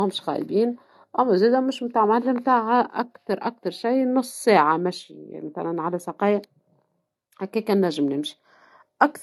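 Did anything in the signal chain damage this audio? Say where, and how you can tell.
Yes. The speech sounds like low-bitrate audio saved at a high bitrate, and this most likely happened at the codec stage. It runs through the whole clip. Nothing is present above about 12.4 kHz, so the top of the spectrum is abruptly cut off. The speech also carries the artefacts of an aggressive lossy encode, even though the file is a generous MP3. That combination fits a roughly 48 kbit/s AAC encode that was later re-encoded as 192 kbit/s MP3. The second pass could not restore what the first pass discarded.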